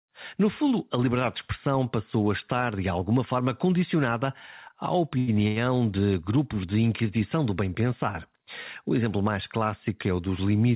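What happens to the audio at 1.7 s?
Nothing goes wrong at 1.7 s: the speech carries on intact through the call path, with only the steady narrowband sound of a phone-line codec that leaves nothing above 4 kHz.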